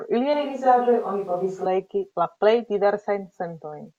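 A switch to a distant microphone runs from 0.34 s to 1.66 s in this speech clip, beginning just before "legi la plej". Over that span the sound turns suddenly roomy and hollow, with thinner bass, and room noise rises to roughly 35 dB below the speech, though the overall level barely changes. The likely cause is that the close microphone dropped out and a more distant pickup, such as a camera microphone, carried the recording until the close signal snapped back.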